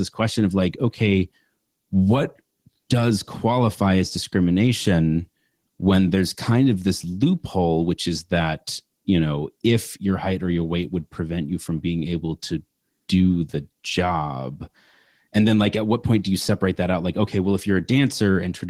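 Opus voice compression affects the speech from start to finish. The encoder appears to run in hybrid mode, with linear-prediction coding below 8 kHz and a transform layer above it. The band stays fullband rather than being narrowed. At a bitrate that sounds like roughly 16 kbps, the excitation is coded coarsely enough to cause plainly audible damage. The speech has a hoarse, slightly robotic grain, and the codec runs on 20 ms frames.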